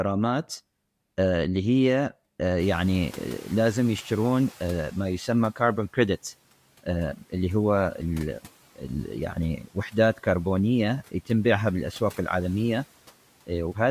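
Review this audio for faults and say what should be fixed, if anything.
Noise suppressor catching up, 2.59 to 5.29 s: the room noise jumps by about 23 dB at around two and a half seconds, and the suppressor's noise estimate is still set for the quieter floor, so the new noise passes through with little reduction. Over roughly 2.7 s the estimate climbs to meet it and the noise sinks by about 8 dB, a fade-down under the speech. A faster-tracking noise estimator, or one that detects sudden noise-floor jumps and re-estimates, would prevent this.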